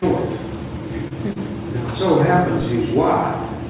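Short stalls from a late packet occur at 1.08 to 1.13 s and again at 1.33 to 1.38 s, in audio carried over a WebRTC call path whose band stops at 4 kHz, as G.711 mu-law coding does. Each time a packet arrived late, the jitter buffer ran dry and the receiver stretched the last sound, by 28 ms and then 30 ms, resuming at the same point. Nothing is lost, but the sound briefly hangs with a faint buzz or dip.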